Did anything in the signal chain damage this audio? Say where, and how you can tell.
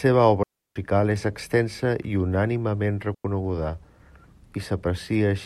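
Yes. Digital wireless dropouts occur at 0.43 to 0.76 s and 3.15 to 3.25 s, in the radio link. The receiver lost too much data and muted the speech for about 330 ms, then 100 ms, leaving clean near-silent holes with quick fades and no noise bursts.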